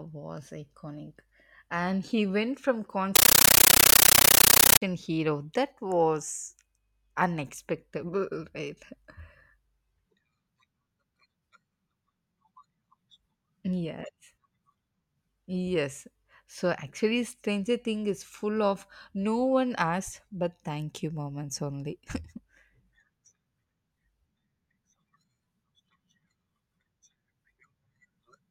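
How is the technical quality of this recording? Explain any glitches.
The recording is marred by one clear fault in this speech clip. From 3.16 to 4.82 s, just after "he went from", a compressed stream played as audio occurs: an encoded Dolby Digital bitstream, which fits AC-3 at a high bitrate, reached the output as raw samples without decoding. Each coded frame becomes a 13.3 ms burst of noise then silence, repeating 31.25 times a second, so the voice is replaced by very loud, chattering static.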